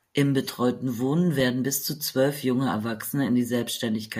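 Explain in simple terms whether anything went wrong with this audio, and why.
Twice the speech freezes for a split second and then carries on: at 1.40 s, just before "bis zu zwölf junge", and at 2.82 s, right after "bis zu zwölf junge". Both are an underrun with held sample. The playback buffer briefly ran dry, so the output held its last value flat instead of playing sound. The first dropout is about 3 ms, which fits a 128-sample gap. The second is under 1 ms. In both, a sliver of live audio was skipped.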